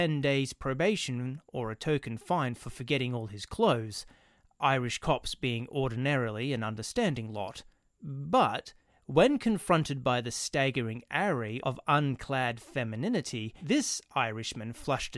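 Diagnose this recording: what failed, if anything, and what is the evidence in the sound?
Nothing in the signal chain appears to have failed: the speech arrives as one continuous, undistorted signal, with no break, level jump, or added noise anywhere along its path.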